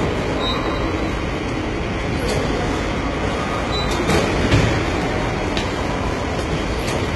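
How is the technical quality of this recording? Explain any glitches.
Heavy low-bitrate coding runs through the whole clip. It sounds like HE-AAC compression, likely at a very low bitrate around 16 kbps. Nothing sits above about 11.8 kHz, and the synthesized treble above the coded band sounds gritty and metallic.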